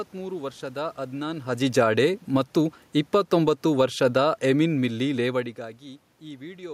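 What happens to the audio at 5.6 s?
Around 5.6 s the automatic gain falling finishes: since about 1.63 s, after "ವರ್ಷದ ಅದ್ನಾನ್", the gain control has eased the level down by about 8 dB, background and all.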